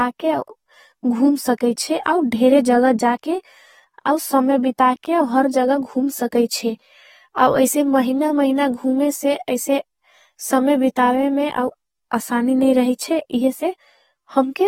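Throughout, the speech shows AAC compression, likely near 40 kbps: nothing above 16.6 kHz, plus warbling, smeared sibilants that a plain low-pass filter wouldn't cause.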